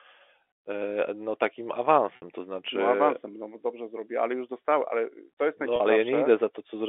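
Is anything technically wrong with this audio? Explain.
Yes. Packet loss with pitch repetition occurs at 2.16–2.22 s (60 ms), between "e no takim" and "to znaczy", and at 5.76–5.80 s (40 ms), after "dostałem ale to jest". The receiver looped the last pitch period through each gap, giving a brief held, buzzy tone. A waveform shows identical repeating cycles, and a spectrogram shows flat, unchanging harmonic stripes.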